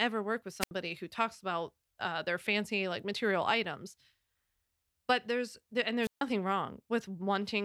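Speech with two wireless microphone squelch dropouts, at 0.60–0.71 s and 6.02–6.22 s, where the FM signal fades until the receiver mutes, leaving near-silent gaps of about 76 ms and 143 ms. They appear as flat waveform holes and blank spectrogram columns preceded by brief broadband hiss.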